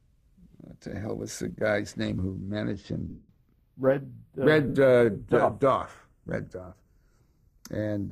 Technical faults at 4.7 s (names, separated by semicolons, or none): channels drifting apart; lost LE Audio frames